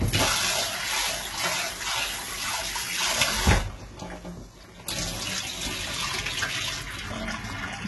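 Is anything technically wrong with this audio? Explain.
Yes. Two faults are audible in these everyday sounds.

Throughout the clip, the treble has a gritty, metallic quality, and nothing is present above 11.8 kHz. This is likely HE-AAC compression, at heavy damage that fits a very low bitrate of about 16 kbps. The codec keeps only the lower spectrum. It then fakes the treble by copying lower bands upward under a coarse envelope. That rebuilt top end sounds bright but false. Its harmonics fail to match across the join.

From 0.27 s to 7.69 s there are faint, evenly spaced ticks, roughly every 0.7 s and around fifteen in all. These are clock slip clicks, likely from two devices on unsynchronised clocks. Their mismatch is on the order of 40 ppm. Each time the drift adds up to a whole sample, one sample is dropped or repeated, which fits single-sample slips. The steady spacing reflects that constant clock error.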